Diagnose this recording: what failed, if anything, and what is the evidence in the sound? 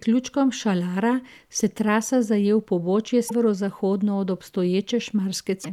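Codec-stage damaged data in the compressed stream: brief glitches at 3.25–3.31 s, right after "trasa zaje v pobočje", and 5.61–5.66 s, where the decoder lost frame sync.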